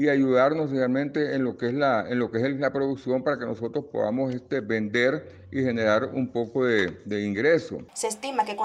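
Nothing technically wrong can be heard anywhere in this audio. No dropouts, distortion or timing problems turn up at any point.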